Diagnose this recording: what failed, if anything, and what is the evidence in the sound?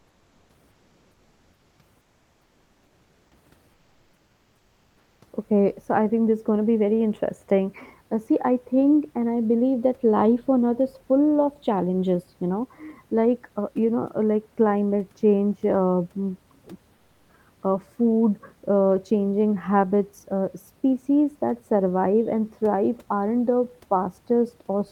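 Comfort noise in place of the background, a codec-stage fault: at 0.00–0.49, 0.71–1.79, 2.01–3.31, 3.73–5.21 and 16.95–17.29 s, room noise becomes a flat, featureless hiss about 2 to 3 dB quieter. Likely Opus discontinuous transmission, with the receiver filling pauses with synthetic noise.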